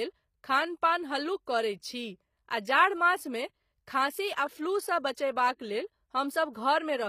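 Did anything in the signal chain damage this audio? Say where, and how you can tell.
Yes, at the codec stage: throughout the speech there is plainly audible HE-AAC compression damage, likely from a low-rate HE-AAC v2 encode fitting about 24 kbps. Nothing lies above 15.5 kHz. The treble is rebuilt from copied lower bands, so it sounds synthetic rather than original.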